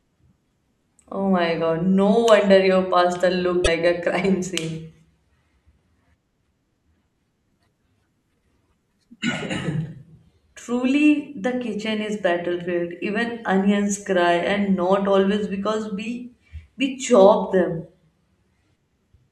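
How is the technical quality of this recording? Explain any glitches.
One glitch mars the recording, between 3.61 and 3.68 s. It is damaged data in a compressed stream: some of the compressed bytes there were lost, zeroed or overwritten. The decoder could not make sense of those frames, so it misread or rejected them, lost its place in the stream and had to hunt for the next valid frame header before it could resume. For those roughly 60 ms, the speech gives way to a short, harsh squawk or blip, and then it picks up again.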